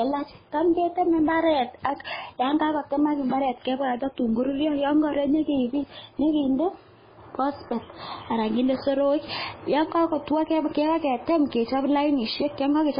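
Throughout the speech, the signal has likely passed through MP3 compression at a very low bitrate, consistent with something around 16 kbps. Starved of bits, the encoder has cut everything above 5 kHz and dropped weaker frequency lines that flicker in and out between frames. The damage is heavy: the voice sounds muffled and dull, with a watery, swirling texture, metallic chirping on s sounds, and consonant onsets that smear instead of landing crisply.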